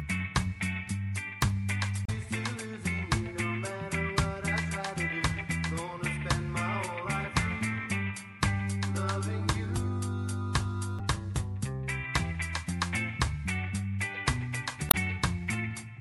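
Damaged data in the compressed stream throws the decoder out of sync while it hunts for the next frame, leaving brief glitches at 2.05–2.10 s, 10.99 s and 14.88–14.95 s.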